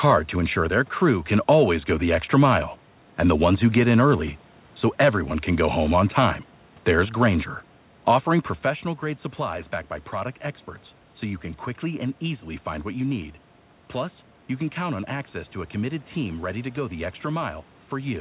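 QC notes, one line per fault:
No faults found in this speech clip. The call path is audible as a telephone-band sound with nothing above 4 kHz, as expected from G.711 mu-law at 64 kbps.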